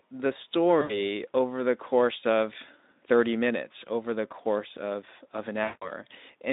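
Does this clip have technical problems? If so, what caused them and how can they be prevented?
Yes. At 0.81 to 0.97 s and again at 5.63 to 5.91 s, the speech is stretched into a buzzy tone or coloured noise that fades and stays weak for a moment afterwards. This is VoIP packet loss concealed by the speech codec: about 80 ms and then 180 ms of audio went missing, and the narrowband Speex decoder filled each gap by repeating its last pitch and filter shape at falling gain. To prevent it, use a jitter buffer with forward error correction on a less congested network path.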